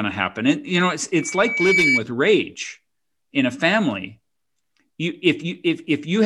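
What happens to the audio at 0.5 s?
Nothing goes wrong at 0.5 s; the speech passes through intact at that moment, with no dropout, click, distortion or other fault.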